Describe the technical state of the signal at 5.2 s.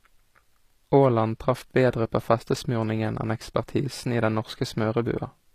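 At 5.2 s, as throughout, HE-AAC compression is plainly audible, likely from a low bitrate near 24 kbps: the treble is rebuilt from copied lower bands, so sibilants sound gritty, and a spectrogram shows repeated patterns up to a hard cutoff at 14.9 kHz.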